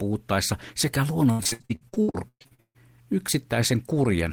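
From 1.31 to 2.77 s the speech breaks into repeated packet loss, producing a robotic sound. Sixteen gaps appear, the longest 143 ms. The codec fills each hole by stretching the last sound. About 57% of the span is patched this way. It sounds choppy.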